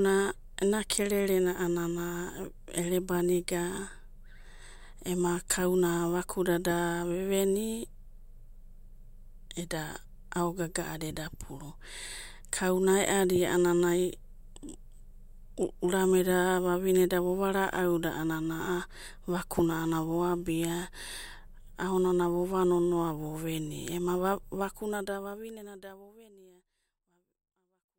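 No faults in this speech recording; the level tapers off gently over the final few seconds, as an editor would shape it, with no click or hard edge at the end.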